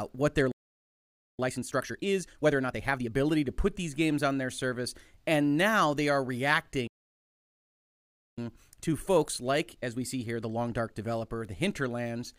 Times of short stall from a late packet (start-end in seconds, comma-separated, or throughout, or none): none